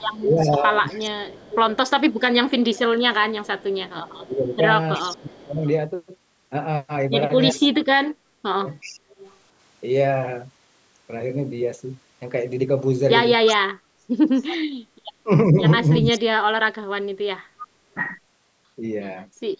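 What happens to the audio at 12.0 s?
Nothing goes wrong at 12.0 s: the speech continues intact there, carrying the ordinary character of call microphone processing, with the lowest bass trimmed and nothing above 8 kHz.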